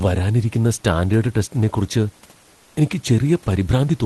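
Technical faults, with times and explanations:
2.51–2.75 s, comfort noise in place of the background: just after "വരാനിരിക്കുന്ന സ്റ്റാൻഡേഡ് ടെസ്റ്റിനെക്കുറിച്ച്", about 240 ms of room background, some 37 dB below the loud parts, turns into a smooth, featureless hiss at the same level. This is likely Opus discontinuous transmission; unlike a noise gate or dropout, nothing falls silent.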